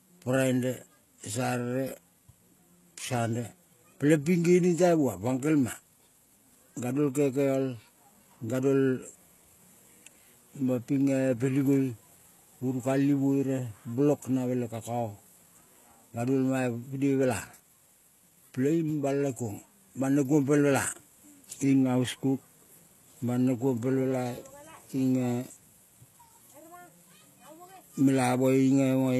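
Across the whole speech, the treble sounds synthetic. Nothing is present above 12.3 kHz. S sounds turn gritty, lispy and metallic. This is likely HE-AAC compression, rebuilding treble from copied lower bands. The plainly audible damage fits a bitrate near 16 kbps.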